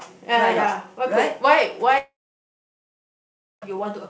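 From 1.98 to 3.64 s the speech is cut: the last sound smears into a fading buzz, then about 1.5 s of near-silence follows before speech resumes with nothing recovered. This is likely a long network dropout, far longer than a brief concealment blip.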